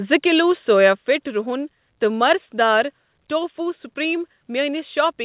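The call software's input gain control likely stepped the microphone volume down on this speech clip, so level drops abruptly by about 5 dB at 1.02 s, just after "زٕ کِلوٗ", and again by about 2 dB at 3.06 s, heard through a narrowband call path with nothing above 4 kHz.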